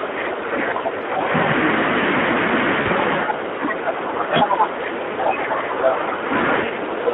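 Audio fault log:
throughout Speex codec: the low-rate CELP encoder has too few bits for the excitation, so the sound is noisy and hoarse. The band is confined to 250 Hz to 3.5 kHz, and the damage is consistent with a bitrate near 11 kbps.
0.00–1.32 s and 6.64–7.14 s speech suppressed in double talk: the echo canceller was likely confused by both sides talking at once and pulled the talker down with the echo. The level sinks by about 15 dB in the first stretch and about 10 dB at the end.
2.81–2.89 s VoIP packet loss concealed by the speech codec: about 40 ms of audio went missing, consistent with two lost 20 ms frames. The decoder stretched its last pitch and filter into a fading fill, and the sound stays weak briefly after the gap.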